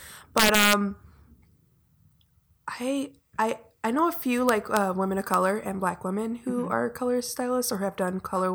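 Integer overflow strikes at 0.38 to 0.73 s, again at 4.49 to 4.77 s between "I know a few" and "women of", and once more at 5.34 s, after "women of" and before "and black women who". Loud speech peaks exceeded the largest integer value. Instead of being limited, each one wrapped to the opposite extreme, about 5 dB over in the first burst and right at the limit later. The result is harsh, violent cracks far sharper than clipping.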